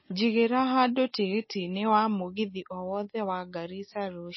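From start to finish the speech has a hard ceiling, with nothing above 5.8 kHz, plus a plainly audible watery, swirly texture. That's likely MP3 compression: short of bits, the encoder chopped the treble and dropped weak detail, which fits a low bitrate around 24 kbps.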